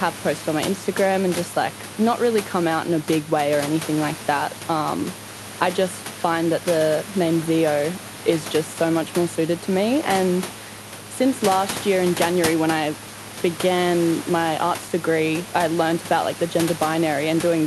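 Speech recording with no technical faults to report.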